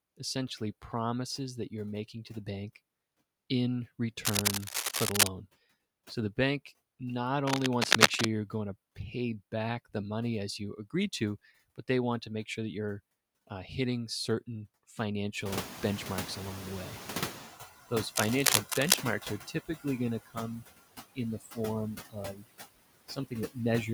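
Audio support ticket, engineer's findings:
Noise suppressor artifacts throughout. Background pumps down between phrases, rises under speech. Suppressor pulling noise down about 17 dB, frame by frame.

Noise suppressor catching up, 15.45 to 17.63 s. Room noise jumps about 22 dB near 15.5 s. Noise estimate lags. Reduction only about 11 dB at first, then noise sinks after roughly 2.2 s.

Speech cut by the noise suppressor at 19.47 to 19.85 s, 21.4 to 21.58 s and 22.32 to 22.44 s. Brief speech fragments swallowed, drops about 15, 12 and 9 dB. Suppressor misclassifying quiet speech as noise.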